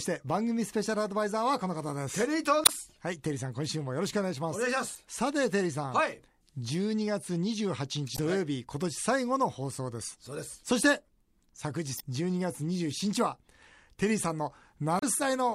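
At 2.63–2.70, 4.93–4.97, 8.14–8.19, 11.96–12.01 and 14.99–15.04 s the speech hits damaged data in a compressed stream: corrupt frames make the decoder lose sync and resynchronise, producing brief chirps or blips. Each shows as a 40–70 ms broadband smear or discontinuity on the spectrogram and waveform.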